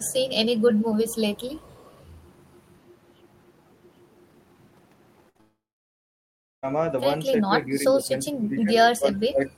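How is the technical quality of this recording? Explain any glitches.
The recording has clear call-path problems: a faint early echo, a chain of packet losses ending in a long gap, and speech ducking near the end.

Echo leak at 0.0 to 0.13 s, 0.59 to 0.95 s and 1.61 to 2.04 s: a faint copy of the sound trails by 365 ms, about 30 to 35 dB down, likely a far-end loudspeaker echo the canceller left in.

Burst of packet loss at 5.29 to 5.37 s: about 60 ms never arrived, and the receiver stretched the last sound for 54 ms, giving a held buzz or fading hiss before playback jumps ahead.

Short concealed packet loss at 5.37 to 5.41 s: a further 20 ms was patched by continuing the previous sound, heard as a brief smear joining the burst.

Long network dropout at 5.41 to 6.65 s: roughly 1.2 s of audio is lost, likely a network outage. Concealment fades quickly, leaving about 1.06 s of silence before sound resumes without the missing part.

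Speech suppressed in double talk at 7.46 to 8.08 s and 8.30 s to the end: the near talker dips by up to about 10 dB over roughly 400 ms in the first stretch, then by up to about 20 dB in the second, likely as the canceller turns down both its own talker and the loudspeaker echo while both sides talk.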